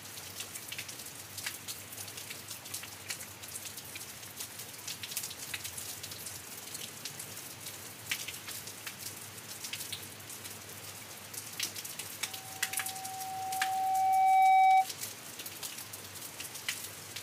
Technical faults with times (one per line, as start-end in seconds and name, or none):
12.25-14.89 loudspeaker feedback squeal